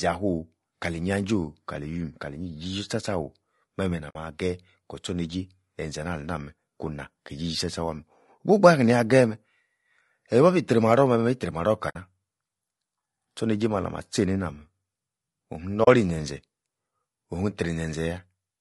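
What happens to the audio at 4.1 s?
At 4.09 to 4.16 s there is AAC frame loss with muting. About 60 ms of audio, which fits three lost frames, was decoded as silence. The overlapping transform windows ramp the level down and back up, so the dropout is a soft-edged hole.

Around this gap, and through the rest of the clip, the speech has a rough, grainy texture, with noise filling between harmonics and a thin, artificial top band. This is plainly audible low-delay AAC compression, likely AAC-ELD at a bitrate around 32 kbps, where short frames resolve pitch harmonics coarsely.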